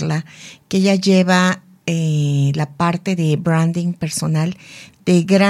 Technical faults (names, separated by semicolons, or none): bit error spike